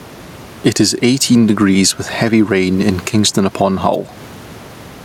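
Gain pumping runs through the whole speech clip, with the level swinging by around 10 dB. The likely cause is input gain set far too high, with a fast limiter clamping down on each loud syllable and releasing in the gaps. The room noise sits about 30 dB below the speech. On a waveform the peaks look flattened to one height.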